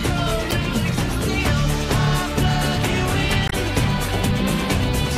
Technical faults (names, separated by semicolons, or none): damaged data in a compressed stream